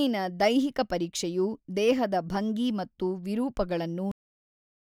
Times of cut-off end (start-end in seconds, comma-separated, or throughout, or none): 4.11-4.87